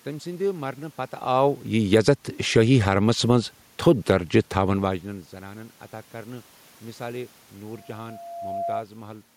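Speech, with three technical faults. From 1.79 s to 3.06 s the level sinks as automatic gain falling takes hold. The gain control judged the input too loud, or its background too strong, and eased its gain down by about 5 dB. Voice and room background drop together, which shows the change is in the gain stage, not at the talker. The slow slope over more than a second is typical of this control.

Inside that stretch, from 2.03 s to 2.44 s, there is a brief swell of automatic gain rising. Here the control briefly judged the input too quiet and pushed the gain up by about 4 dB. Again the background lifts with the voice. The earlier level change near 1.0 s is different, since it sounds like the talker shifting relative to the microphone, as does another near 4.5 s.

From 7.69 s to 8.83 s a loudspeaker feedback squeal appears. A single tone at 685 Hz grows over roughly a second. It ends up about 10 dB above the speech. 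The microphone is hearing the loudspeaker it feeds, and at this frequency the loop gain exceeds one. Each pass round the loop makes the tone stronger, so it swells into a steady howl.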